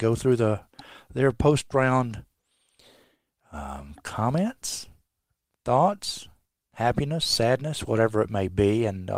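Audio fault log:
No audible faults detected.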